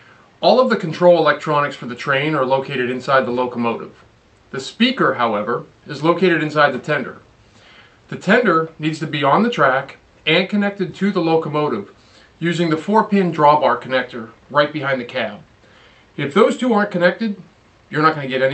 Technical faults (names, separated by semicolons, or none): none